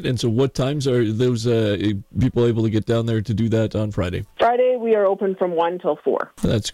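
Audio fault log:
No faults detected; nothing to log.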